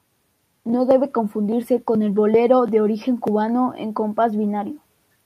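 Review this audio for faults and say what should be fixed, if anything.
No faults; nothing needs fixing.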